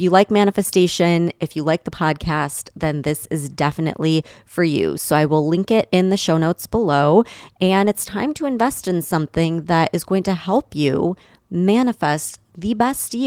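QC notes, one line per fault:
7.85 s, lost packet rebuilt from error correction: a 20 ms rougher, noisier stretch with no gap, fitting one lost packet replayed from the next packet's low-bitrate copy.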